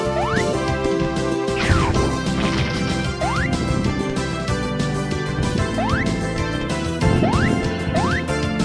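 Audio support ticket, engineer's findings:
No faults found on listening.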